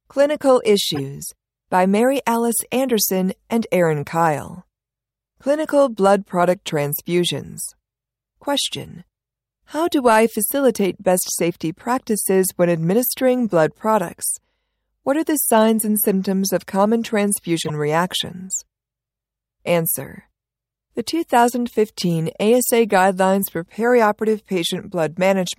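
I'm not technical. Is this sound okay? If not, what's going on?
No. The speech has corrupt frame decoded faults at 0.95–0.99 s, 5.67–5.69 s, 13.50 s and 17.6–17.7 s. Each time, a couple of damaged chunks of the compressed audio were played anyway, causing brief chirps or noise bursts.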